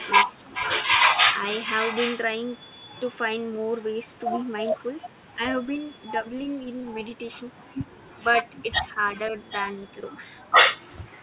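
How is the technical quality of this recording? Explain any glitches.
The recording has narrowband, telephone-grade speech with nothing above 4 kHz. It shows two recurring glitches, echo leak and speech suppressed in double talk.

Echo leak, 0.0 to 2.25 s and 8.53 to 9.68 s: a faint copy of the speech trails it by 772 ms. It sits about 15 dB down at first and about 25 dB down later. The likely cause is loudspeaker pickup that the echo canceller missed. A spectrogram shows ghostly harmonics displaced to the right.

Speech suppressed in double talk, 0.44 to 0.5 s, 5.34 to 5.97 s and 8.86 to 9.34 s: the talker's level briefly sags while the other side speaks, by up to roughly 15 dB, with only a slight dip in the last span. This is likely the echo canceller ducking both voices together. The waveform shows short notches.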